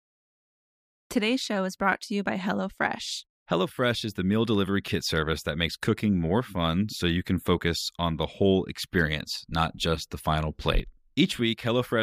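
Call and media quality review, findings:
No audible faults found in this speech recording.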